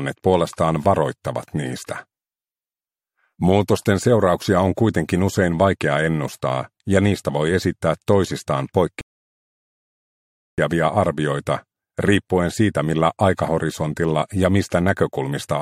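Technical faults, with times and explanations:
9.01 to 10.58 s, rebuffering stall: the sound drops to silence for about 1.57 s and then carries on exactly from the point where it stopped, with nothing skipped. The player had used up all the audio it had downloaded, so it waited for more data before continuing. That gap is extra time added to the clip and no content is lost. On a waveform this shows as a flat stretch between two sections that join without a seam. A spectrogram shows an empty vertical band across all frequencies.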